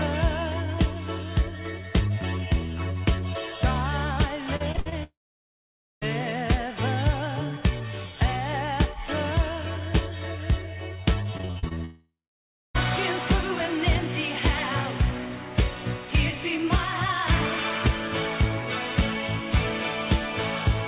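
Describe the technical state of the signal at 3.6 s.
The signal at 3.6 s is intact, with no fault at that moment, and the audio carries the normal narrowband character of the call path, with nothing above 4 kHz, which fits a 64 kbps G.711 mu-law connection.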